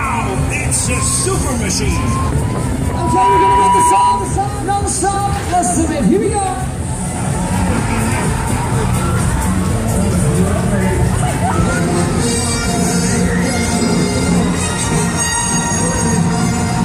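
Loudspeaker feedback squeal from 2.82 to 4.49 s: the microphone re-captures its own loudspeaker, and a 976 Hz tone swells within roughly 0.4 s to about 5 dB above the audio.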